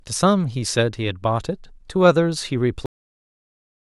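At 2.86 s there's a cut-off end: the final buffers never made it out, so the speech stops dead mid-sound and drops straight into digital silence.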